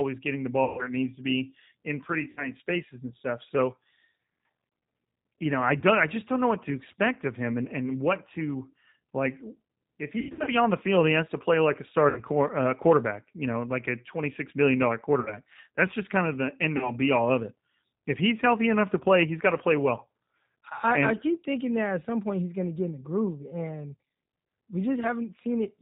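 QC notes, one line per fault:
throughout: G.729 codec (G.729A at 8 kbit/s), plainly audible damage. The speech is rebuilt from a vocal tract filter, a pitch predictor and a sparse set of pulses per 10 ms frame rather than the original waveform, so it sounds rough and slightly synthetic. Nothing above 4 kHz survives, which leaves the sound band-limited and dull, with no air or sibilant detail.
0.64–0.90 s, 2.31–2.48 s, 5.80–5.84 s, 10.19–10.50 s, 12.10–12.21 s, 15.20–15.39 s, 16.77–16.91 s: VoIP packet loss concealed by the speech codec. About 140 ms is missing at the first event. At the second, 60 ms is missing between "to be in pretty" and "spaces and stuff". The third is a single 20 ms gap, consistent with one lost packet. Around 10.2 s, 200 ms of loss is scattered over 280 ms with a longest run of 100 ms. After "to play like a" and after "twenty six million dollar", 60 ms is lost each time, and the last event loses 40 ms. 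The decoder extends its last pitch and filter with falling gain, so each gap turns into a buzzy tone or a coloured noise that fades. Speech stays weak or smeared briefly after each gap while the frame-to-frame state recovers.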